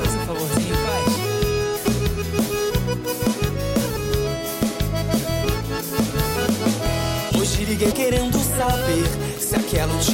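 Damaged data in a compressed stream causes brief glitches at 1.82–1.86 s and 7.88–7.93 s, where corrupted frames make the decoder lose sync and search for the next header.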